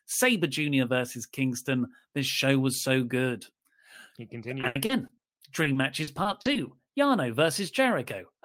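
Speech, with two bursts of repeated packet loss (robotic sound), from 4.61 to 5.11 s and again from 5.63 to 6.57 s. Packets kept going missing or arriving late, and each hole got patched by stretching the previous sound, so it goes choppy. The first burst is worse: gaps up to 80 ms, with about a third of it filled in. The second has shorter gaps of up to 40 ms, with about a sixth papered over.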